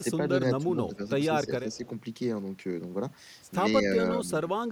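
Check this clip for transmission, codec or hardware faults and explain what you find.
Two kinds of fault show up in the speech: repeated gain dips consistent with speech suppressed in double talk, and a brief echo leak.

Speech suppressed in double talk occurs at 0.00–0.31 s, 0.57–0.69 s, 0.88–1.02 s, 1.28–1.84 s and 4.15–4.71 s. The voice sinks by about 10 dB in the first four spans and by about 20 dB in the last. The likely cause is an echo canceller treating simultaneous far-end speech as echo and attenuating the near talker along with it.

An echo leak appears at 1.73–1.77 s, inside the fourth suppressed span. A faint delayed copy of the voice arrives roughly 0.16 s behind the original, about 30 dB below the direct speech. It most likely comes from a loudspeaker-side echo canceller letting residual microphone pickup through and returning it down the line. The copy is short and low, a ghost trailing the speech.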